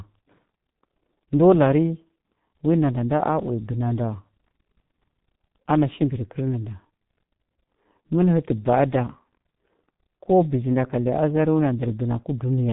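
From start to finish the speech has been through the G.723.1 codec, and it's a heavy hit. Nothing survives above about 3.8 kHz, so everything sounds muffled, and the slow-updating voice model turns it hoarse with smeared consonants, which fits a bitrate around 6 kbit/s.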